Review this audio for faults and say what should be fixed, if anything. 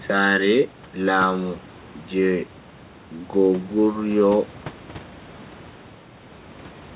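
Nothing here needs fixing: the quiet room noise, about 24 dB below the speech, belongs to the recording, and the lack of anything above 4 kHz is just what a phone-quality call path like G.711 mu-law does to it.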